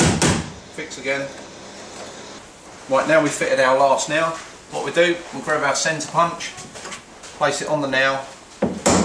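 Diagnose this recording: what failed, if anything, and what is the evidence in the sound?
Nothing here points to a failure at any stage of the chain; listening closely, there's no audible evidence of a fault anywhere in the recording.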